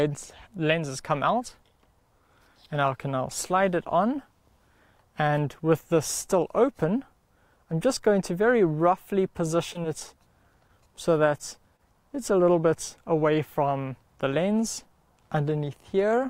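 From 9.73 to 10.20 s there is repeated packet loss, giving a robotic sound. Several short holes, none over 13 ms, were patched by extending earlier audio, so the sound turns choppy.

At 11.77 to 11.81 s, a short concealed packet loss covers about 20 ms. The receiver continued the previous sound, leaving a brief smear.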